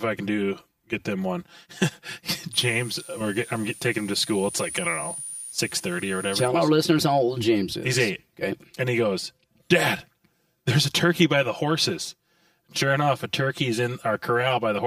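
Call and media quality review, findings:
Channel delay (comb filtering), entire clip: hollow, phasey speech. One channel lags the other by around 5 ms before the mono sum, giving a first notch near 100 Hz and repeating notches up the band. Spectrogram: fixed, evenly spaced dark horizontal stripes through all speech energy.

Switching supply whistle, 2.53 to 6.48 s, ending just before "our listeners how old": thin high whistle. A switching power supply is in audible burst mode or beating with another, drifting between 9.3 and 9.7 kHz, roughly 15 dB below the speech. Spectrogram: wavering line there.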